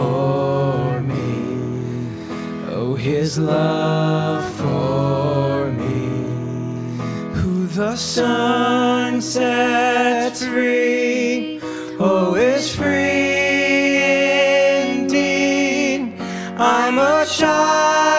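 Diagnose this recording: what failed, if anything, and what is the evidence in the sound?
Nothing failed here, and none of the stages between capture and playback leaves any audible trace of trouble. There is no evidence of a fault at any point in the sound, so there is nothing to diagnose.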